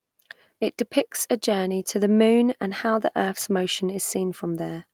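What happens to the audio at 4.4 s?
Nothing goes wrong at 4.4 s: the speech carries on intact through that moment with no audible fault.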